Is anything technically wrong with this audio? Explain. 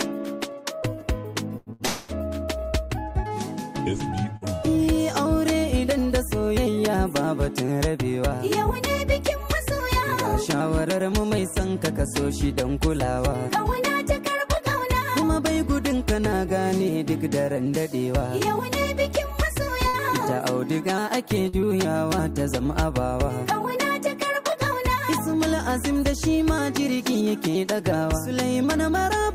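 Yes, there are several network playback faults.

From 1.57 to 4.44 s there are scattered short gaps: about three small holes, roughly a fifth of a second in total and none longer than about a tenth of a second, each patched by continuing the last sound. They come through as brief ticks or smears. A spectrogram shows short smeared bands where fine detail briefly goes flat.

Within that stretch, from 1.86 to 2.12 s, a call audio freeze holds the sound for 230 ms, likely because packets stalled and the jitter buffer emptied. The last sound carries on as a fading buzz, then the audio resumes where it stopped, with nothing lost. A waveform shows a repetitive, decaying block there.

Jitter buffer speed-up occurs from 6.88 to 10.84 s at 101% speed, trimming about 40 ms, and from 14.31 to 27.27 s at 102%, trimming about 300 ms. The receiver drops tiny pitch-period slices to shrink its backlog, so pitch stays put while the pace runs slightly faster. 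A spectrogram shows subtly compressed timing with unchanged harmonics.

At 19.88 to 19.97 s, a short stall from a late packet stretches the current sound by 59 ms until the packet arrives, then playback continues with nothing skipped. It is heard as a momentary held buzz or dip. The waveform shows a brief repeated cycle inserted.

At 21.49 to 21.56 s, short concealed packet loss leaves 60 ms missing. About 42 ms of synthesized continuation bridges the gap before blending back, pulling timing about 20 ms earlier. It sounds like a quick smear or wobble. A spectrogram shows a smudged patch lacking sharp onsets.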